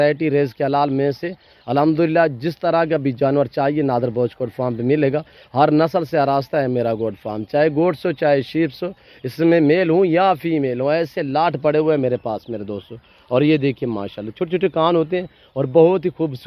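No technical faults can be heard anywhere in the signal.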